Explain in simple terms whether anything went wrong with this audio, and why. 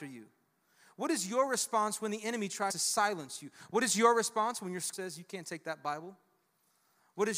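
Compressed frames skipped: several chunks of the coded audio, each 23.2 ms long, were lost or rejected as damaged by the decoder. The speech jumps ahead, dropping roughly a tenth of a second at 2.70 s and about a fifth at 4.93 s.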